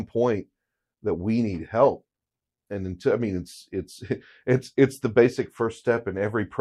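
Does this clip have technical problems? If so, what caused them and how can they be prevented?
No, listening to this speech recording brought up nothing that stood out as a technical problem, so there is no cause to trace or prevention to suggest.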